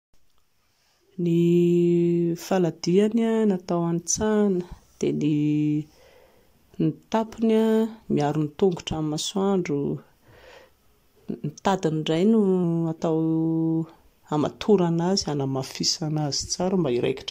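Speech jumps 6.4% fast and about a semitone sharp from 4.75 to 5.32 s and 11.49 to 12.64 s, then 6.4% slow and flat from 15.39 s onward. A drift correction step, likely a clock-matching resampler, abruptly changes rate. Spectrogram harmonics shift as a block.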